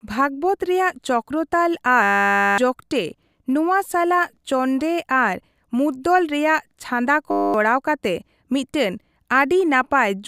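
System hang loops at 2.03 to 2.58 s and 7.31 to 7.54 s: the system stalled while the sound hardware kept replaying one 10 ms slice of its ring buffer, producing a steady 100 Hz buzz that replaces roughly half a second, then a fifth of a second, of speech.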